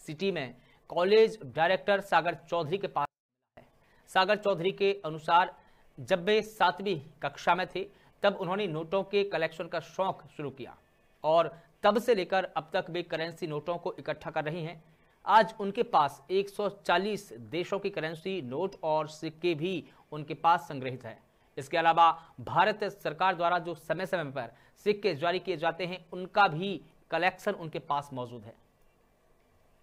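From 3.05 to 3.57 s, the sound falls almost to silence. This is a 24-bit alignment error, too quiet. Samples sitting in the low 24 bits of each 32-bit word were read as full 32-bit values. The level drops by about 48 dB, yet stays clean.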